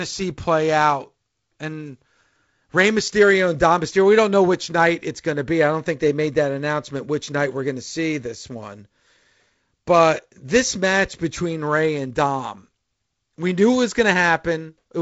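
No technical faults are audible.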